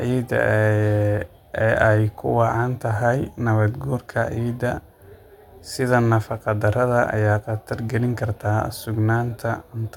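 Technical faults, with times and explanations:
No technical fault can be heard anywhere in this speech recording, and the signal holds steady for its whole duration.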